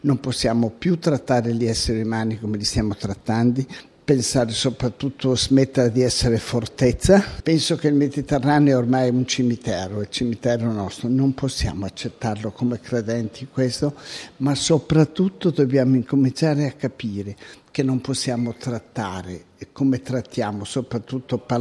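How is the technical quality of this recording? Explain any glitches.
Nothing stood out as a glitch or technical problem on listening to this recording.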